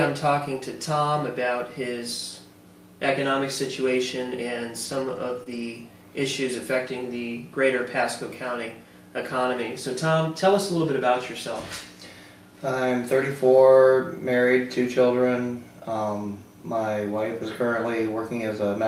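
A burst of lost packets rebuilt from error correction runs from 4.85 to 5.62 s: sixteen separate 20 ms frames, roughly every 40 ms, each replayed from the low-bitrate copy carried in the following packet. No gaps open, but the stretch turns rough and noisy. Inside that burst, a short concealed packet loss at 5.43 to 5.48 s had no redundant copy. The decoder extrapolated about 20 ms of missing audio from the preceding signal, leaving a brief smear or wobble before blending back.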